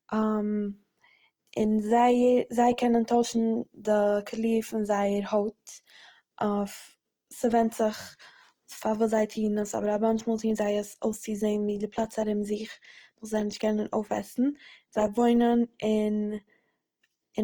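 Throughout this speech clip the sound is rough and grainy, with a noisy, hashy texture in place of clean harmonics, though the band still extends to about 20.2 kHz. That points to Opus compression, likely in its music mode at a low rate near 24 kbps, filling starved bands with folded or noise content.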